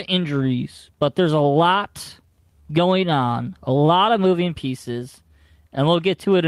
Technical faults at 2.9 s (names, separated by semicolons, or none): clock drift between sender and receiver; repeated timing corrections